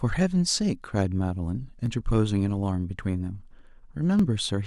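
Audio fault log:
0.69–4.19 s, clock drift buffer slips: about four short clicks recur every 1.17 s in the speech, each a brief jump where a few dozen samples are dropped or repeated. The likely cause is two devices whose clocks differ by roughly a tenth of a percent. The metronome-steady spacing marks it apart from random dropouts.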